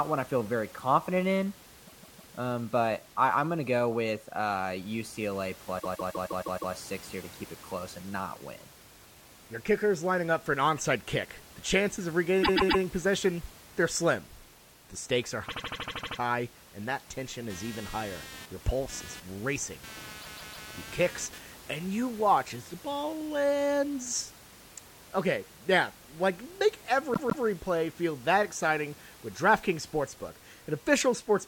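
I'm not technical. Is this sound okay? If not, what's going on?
No, there are two problems.

The main one is repeated frames: a short chunk of the recording gets played several times in a row, so the speech stutters like a skipping CD. It happens six times: 1.87 to 2.34 s, 5.79 to 6.73 s, 12.42 to 12.82 s, 15.48 to 16.18 s, 20.21 to 20.68 s, and 27.13 to 27.44 s. The repeated bit is usually about 0.16 s long, shorter at 12.4 s and shortest at 15.5 s, where a tiny piece loops nine extra times. Altogether the stutters add over three seconds that weren't in the original.

The second is computer activity noise, from about 17.5 to 21.4 s. The computer's own electrical activity is leaking into the audio circuit, so you hear a buzzy, pulsing hum, roughly 200 pulses a second, sitting fairly low under the speech. It follows what the computer is doing, not what's being said. One of the stutters, at 20.2 s, happens during this stretch. 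The faint background noise of the room is just part of the recording and isn't a fault.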